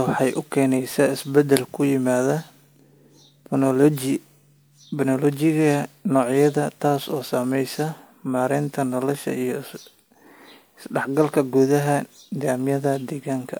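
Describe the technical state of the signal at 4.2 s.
At 4.2 s the speech carries generation loss, present throughout the clip rather than at that moment alone. The signal was most likely decoded and re-encoded with MP3 around five times, with each pass quantising again on a shifted frame grid so the errors stack. The result is swirly, smeared and hollow, with softened consonant attacks, more degraded than a single MP3 pass at roughly 128 kbit/s would leave it.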